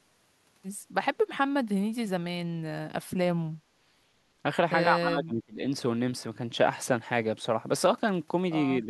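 Speech, pulled down twice: by about 30 dB from 5.01 to 5.61 s, and by about 10 dB from 8.84 s to the end. This speech suppressed in double talk likely comes from an echo canceller treating the talker as echo. The waveform pinches inward and the spectrogram fades at those spots.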